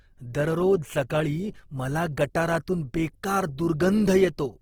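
Throughout, the speech is grainy and rough, likely from Opus compression near 16 kbps; a spectrogram shows noise-filled bands up to 20.3 kHz, with few holes.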